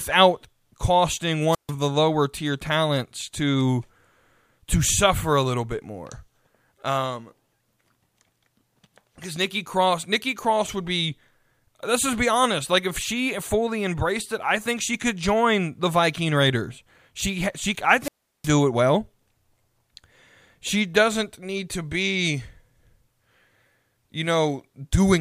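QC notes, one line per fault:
1.50–1.71 s, wireless microphone squelch dropout: the RF signal fades, hiss swells briefly, then the receiver's squelch mutes the output for 0.14 s before the audio returns on "the lower tier talents". The rising static before a clean near-silent hole marks it as analogue FM squelch rather than a digital packet dropout, which would cut abruptly or repeat fragments.
18.00–18.52 s, wireless microphone squelch dropout: after "she I", the same hiss-then-mute pattern recurs with a longer 0.36 s hole, and the audio resumes at "it well".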